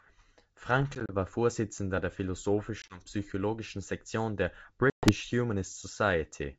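Packet loss on an ADPCM call strikes at 0.95–1.13 s, 2.82–3.02 s and 4.90–5.13 s. Hard silent gaps cut in: 50 ms, then 40 ms, then 130 ms. The decoder's predictor falls out of step, so the sound returns slightly distorted before settling.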